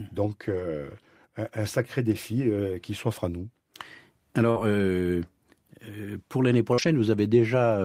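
Speech with two kinds of network fault. Lost packets rebuilt from error correction sound rougher and noisier, with no gap, at 0.47–0.61 s (80 ms), at 2.13 s between "un sacré" and "euh qui s'offre à", at 4.56–4.58 s, and at 6.78–6.88 s (60 ms). The receiver played low-bitrate backup copies carried in the following packets. Short concealed packet loss appears at 4.51–4.58 s and 6.74–6.80 s, just after "pour l'année". About 40 ms arrived too late each time. The decoder extended the preceding sound to fill the hole, leaving a brief smear.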